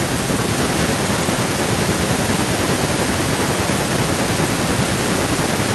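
From 0.54 s to the end, a delayed copy of the speech trails it by 788 ms, roughly 10 dB quieter. This is an echo leak. One side's echo canceller likely failed to remove what its microphone caught from its loudspeaker.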